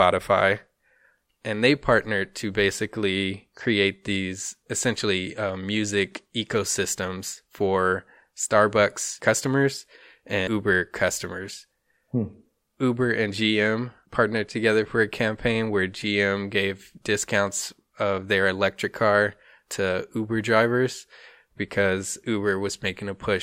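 At 9.44 s a corrupt FLAC frame gives a short click peaking near about −23 dBFS. Bad bits threw off prediction, and the clean audio straight after points to one damaged frame. From 10.38 to 10.57 s compressed frames were skipped, so the speech jumps ahead by roughly a fifth of a second. The lossless frames do not overlap, so the join is a hard click, much like the earlier one.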